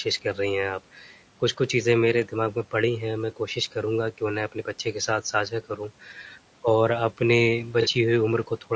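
From start to finish, the speech has a rough, grainy texture. Noise sits between the harmonics. The damage is plainly audible. This points most likely to low-delay AAC compression, the AAC-ELD type used in video calls, at around 32 kbps. Its short frames cannot resolve voiced harmonics finely, and the bits run thin. Nothing is heard above 8 kHz, which fits call microphone processing. A faint room noise sits about 24 dB below the speech.

From 0.95 to 1.13 s, the speech is cut by the noise suppressor. The suppressor mistook part of the speech for background noise and turned it down. The drop reaches about 8 dB at its deepest. Roughly 150 ms of sound is affected. That stretch sounds faint and swallowed, as if the speaker pulled briefly away from the microphone.

From 7.82 to 7.87 s, there is AAC frame loss with concealment. The loss covers about 30 ms of audio, which fits a single lost frame. 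The decoder had nothing to play there. It filled the hole by rebuilding sound from the last good spectrum. Because the gap is short, it does not fade into silence. Instead it comes through as a brief smeared, noisy patch.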